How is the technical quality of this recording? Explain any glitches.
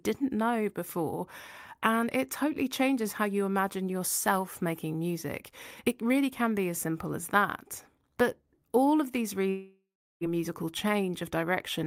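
One glitch occurs near the end of the speech. From 9.49 to 10.24 s there is a long network dropout, likely from audio packets failing to arrive. About 0.72 s of material is missing. The receiver stretches the last sound into a fading buzz or hiss, then goes silent for about 0.37 s before speech resumes with a gap. A spectrogram shows smeared, decaying harmonics, then a blank band.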